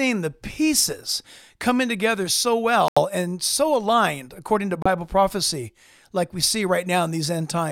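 At 2.88 s, after "pieces coming together so", and at 4.82 s, before "prophecy like we see", the speech drops to about 83 ms and 30 ms of silence, a Bluetooth stall, likely from a buffer that ran dry.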